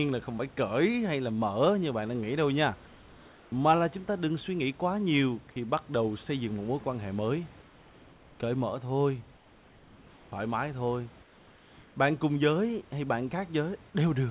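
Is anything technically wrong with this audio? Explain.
Yes. Comfort noise in place of the background occurs at 2.88–3.52 s, 7.62–8.40 s (after "mối quan hệ mới"), 9.36–10.32 s and 11.22–11.96 s. In these pauses the room background becomes a flat, featureless hiss about 2–3 dB quieter, likely because discontinuous transmission stopped sending audio and the receiver filled the gaps with synthetic noise.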